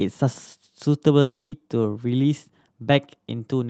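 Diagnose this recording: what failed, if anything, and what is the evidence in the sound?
At 1.21 s the speech smears into a buzzy, fading continuation of the last sound, then goes silent until 1.54 s, resuming with about 0.3 s missing. This is likely a long network dropout: packets stopped arriving, and concealment filled briefly before giving up.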